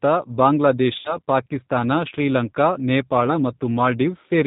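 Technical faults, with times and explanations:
Throughout, G.729 codec. The speech is carried at 8 kbit/s, and the coding damage is plainly audible. The decoder rebuilds each 10 ms frame from a vocal tract filter, a pitch predictor and a few pulses, not from the real waveform. That gives the speech a rough, slightly synthetic edge. Nothing above 4 kHz survives, so the sound is dull and boxy, with no air or crisp sibilance.
0.99–1.17 s and 3.27–3.44 s, VoIP packet loss concealed by the speech codec. The first gap drops 60 ms, which fits six 10 ms frames. The second drops 10 ms, which fits a single frame. The decoder fills each hole by stretching its last pitch and filter while lowering the gain. This produces a buzzy tone or a coloured noise that fades. Each frame builds on the previous one, so the speech stays weak or distorted for tens of milliseconds after the packets return.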